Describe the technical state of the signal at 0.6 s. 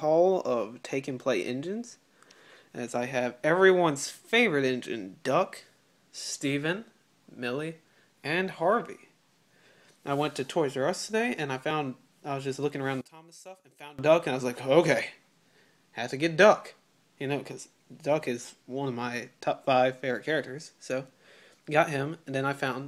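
At 0.6 s the signal is intact, with no audible fault at that moment.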